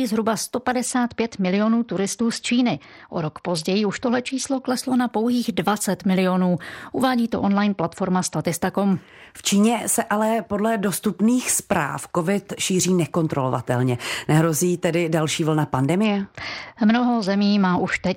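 Speech with a Bluetooth SBC bit pool drop at 0.86–4.68 s (ending before "na pouhých"), 7.32–8.44 s, and from 16.04 s (after "tedy další vlna") to the end. Treble dulls and gritty noise rises, which fits the bit pool falling from 31 to 9, near 72 kbps. Unlike a fixed low-bitrate encode, full quality returns between episodes.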